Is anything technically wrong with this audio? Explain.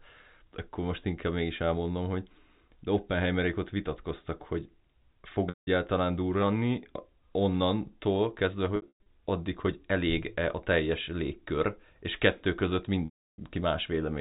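Yes. Packet loss with pitch repetition breaks the speech at 5.49–5.67 s (after "ott vitatkoztak hogy fog"), 8.76–9.06 s (scattered losses, longest run 120 ms, before "addig hogy"), and 13.05–13.38 s (after "légkör és kettő között"). Each gap, consistent with lost 30 ms packets, is bridged by looping the last pitch period, which fades out. So you hear a buzzy held tone decaying to silence, not the abrupt hole a plain dropout leaves.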